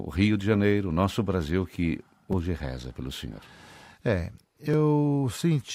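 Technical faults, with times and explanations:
2.33 s, repeated buffer: fresh audio arrived late, so one 5.3 ms block, which fits a 256-sample buffer, played twice more, giving a brief buzzy click.
4.74 s, repeated buffer: the same short block replayed once while the next was late; the hard join makes a tiny click, with nothing skipped afterward.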